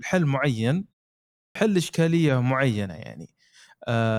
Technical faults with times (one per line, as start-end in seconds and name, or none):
1.43-1.55 clipped start after a pause